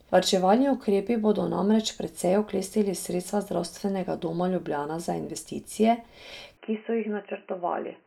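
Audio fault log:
6.57 s to the end, input switched to a poorer device: right after "za investicije" the speech abruptly goes narrow and boxy, with nothing above 3 kHz, and it drops about 5 dB in level. There is no gap at the change. A faint new background noise sits roughly 40 dB below the speech. The likely cause is the recording input jumping to a different microphone or a headset call profile with a band-limited path, its own gain and its own noise floor.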